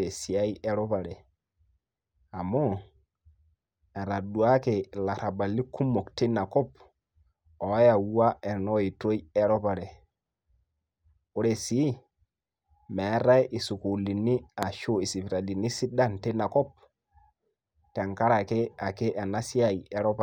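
A loud pop at 14.63 to 14.65 s: one sharp spike, roughly 15 dB above the speech, which continues beneath it, likely a brief voltage pulse from a plug, switch or static discharge.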